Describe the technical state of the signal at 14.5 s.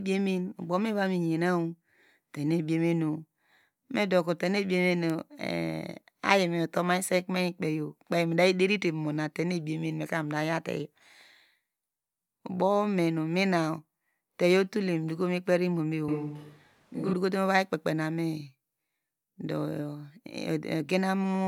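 At 14.5 s the speech signal is intact, with no audible fault at that moment.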